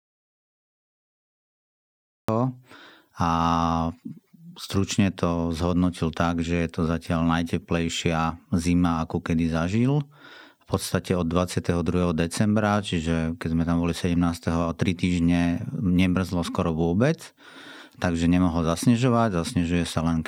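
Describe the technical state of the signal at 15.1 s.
At 15.1 s the speech signal is intact, with no audible fault at that point.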